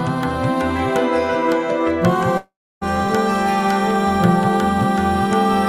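At 2.37 s a long network dropout likely halted audio; the last sound fades as buzz or hiss into silence, returning at 2.83 s, 0.44 s lost.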